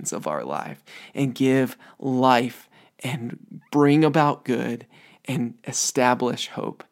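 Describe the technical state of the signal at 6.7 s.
At 6.7 s the speech signal is intact, with no technical fault present at that moment.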